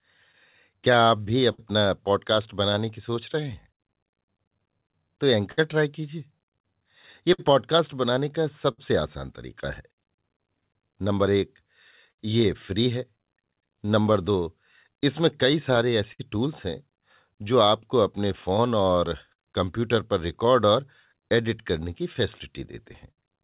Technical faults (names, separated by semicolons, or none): clock drift between sender and receiver; scattered short gaps; repeated timing corrections; short stall from a late packet